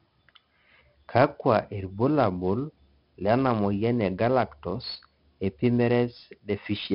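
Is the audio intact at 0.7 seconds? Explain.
No. At 0.7 s, as throughout the speech, the sound carries 4-bit ADPCM compression damage, and it is heavy. Each sample is coded as a coarse 4-bit step from a prediction, so a gritty hiss rides on every loud syllable, with harsh distortion on sharp onsets. Nothing sounds above 5.3 kHz, which points to a low sample rate and fits a rate near 44 kbps. Unlike a perceptual codec's swirling, warbling artefacts, this noise is steady and broadband, rising and falling with the level.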